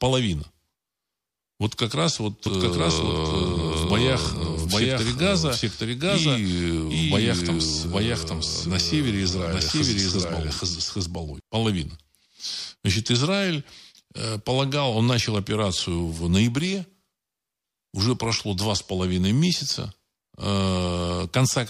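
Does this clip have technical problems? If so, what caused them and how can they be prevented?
Yes. From 2.46 to 11.40 s a doubled audio track runs: a second, equally loud copy trails by roughly 0.7 s, likely from a slower second capture path or an edit leaving two copies. On a spectrogram every pattern repeats, shifted right, starting and stopping abruptly. Prevent it by routing each source through one capture path and checking edits for overlapping duplicate regions.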